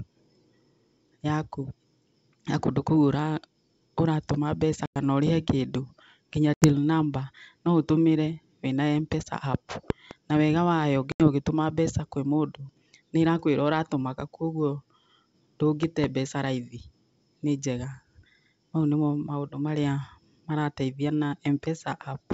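At 4.86 to 4.97 s the speech drops into a hard-edged 100 ms silence, then comes back slightly distorted. This is packet loss on an ADPCM call: the missing audio was filled with silence, and the decoder's predictor and step size lost sync with the sender's until they settled.

The same gap recurs at 6.54 to 6.69 s and at 11.12 to 11.28 s, each about 80 ms, with the same rough restart.

Between them, at 9.90 to 10.13 s, two sharp loud pops land in quick succession, well above the speech, which continues underneath. A pair of loud pops like this most likely comes from a voltage step or pulse, such as a plug, switch or static discharge, entering the signal path.

The identical double pop returns at 15.83 to 16.06 s. Through all of this the G.722 wideband telephone coding adds at most a faint hiss in the upper band.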